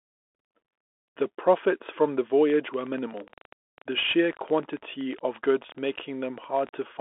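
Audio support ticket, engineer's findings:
Bluetooth CVSD headset codec, whole clip. Narrowband, band roughly 250 Hz to 3.5 kHz, nothing above 3.8 kHz. Plainly audible damage: granular hiss under speech, scratchy sibilants, loud high content distorting where one-bit delta steps can't keep up. Sound fits a 64 kbps CVSD link.

Train of clicks, 2.50 to 6.83 s. Irregular ticking around 13 per second, roughly fifty clicks, peaks about level with the speech, audible in pauses too. Likely interference or a struggling interface injecting repeated similar pulses.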